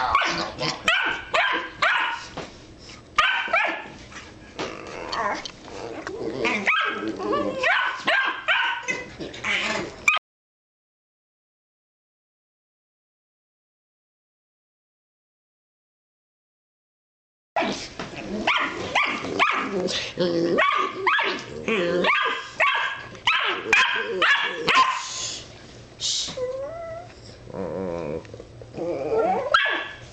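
An audio dropout to silence runs from 10.18 s to 17.56 s, with about 7.4 s of sound cut off mid-flow and replaced by silence, with no room tone at all. This most likely comes from the input being lost, through a disconnect, failed link or mute, while recording continued.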